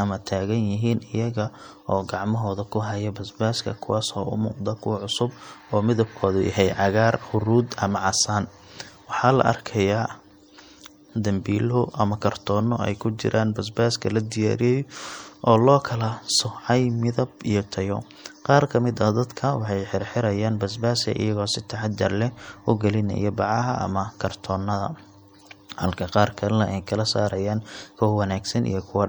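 MP3 compression damage runs throughout the speech, plainly audible as a watery, swirling texture with dulled treble. The likely cause is an encoder starved of bits, cutting the top end and letting weak frequency lines flicker between frames, which fits a bitrate around 64 kbps.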